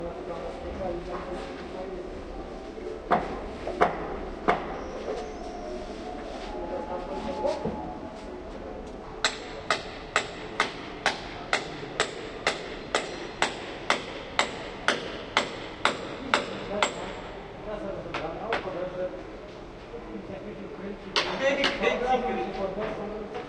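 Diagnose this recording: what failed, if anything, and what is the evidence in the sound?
Nothing in the chain has failed: the everyday sound reaches the listener continuous and stable, with no interruption, level disturbance or added noise from any stage between capture and playback.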